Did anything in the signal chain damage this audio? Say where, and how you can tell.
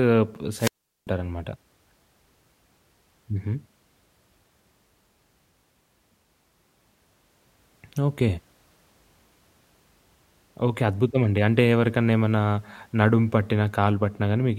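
Yes, there's a wireless microphone squelch dropout early on, in the analogue radio link ahead of everything else. From about 0.56 s to 1.08 s the speech gives way to a short swell of hiss, then a hole of near silence lasting about 395 ms before the speech comes back. That's the FM signal from the transmitter fading until the receiver's squelch decides it's lost the carrier and mutes its output.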